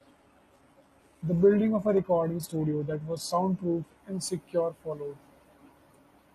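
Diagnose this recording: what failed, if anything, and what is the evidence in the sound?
The fault is an adaptive stream starting at a low bitrate, at the codec and network stage. From 0.0 to 4.0 s the treble sounds thin and synthetic with stronger codec smearing and nothing above 12.4 kHz, which points to a low-rate HE-AAC version near 16 kbit/s. At 4.0 s, just before "and secure followed", quality jumps to an AAC-LC stream at 96 kbit/s with no gap or stall. That seamless step separates it from rebuffering or a dropout.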